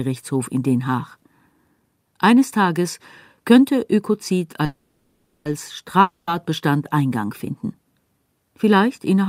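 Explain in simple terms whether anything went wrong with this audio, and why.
Two problems can be heard. From 4.65 to 5.47 s the speech stops and the last sound hangs on as a fading buzz, then picks up exactly where it left off, 0.8 s late. That is a call audio freeze, likely from packets held up in transit.

From 6.01 to 6.29 s there is another fading buzz, but this time the speech comes back further along, with about a quarter of a second gone. That is a long network dropout, likely where that audio never arrived.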